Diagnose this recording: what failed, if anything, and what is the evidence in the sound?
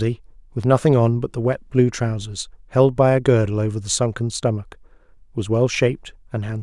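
Nothing failed: no stage from capture to playback leaves any audible trace of a fault anywhere in the speech.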